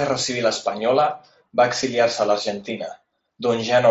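At 0.54 s, just after "guerra civil", and again at 1.82 s, the speech shows concealed Bluetooth headset packet loss. Each gap is about 7.5 ms, which fits one lost mSBC frame on the headset link. The receiver filled each hole by repeating the best-matching stretch of the preceding waveform, so both events are nearly hidden rather than a buzzy held tone, with the light grain of the mSBC codec on louder sounds.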